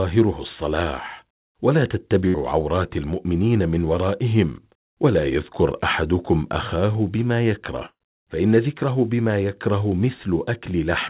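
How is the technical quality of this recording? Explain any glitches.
The recording has two bursts of packet loss, at 2.28 to 2.36 s and 7.86 to 8.02 s. Packets arrived too late or not at all, so the receiver extended the last sound and faded it, giving a brief held buzz or hiss. The first gap lasts about 60 ms. The second runs about 140 ms and decays into roughly 60 ms of silence. Afterwards the speech resumes with the missing stretch skipped. Nothing sounds above 4 kHz, which fits a narrowband call codec such as G.711.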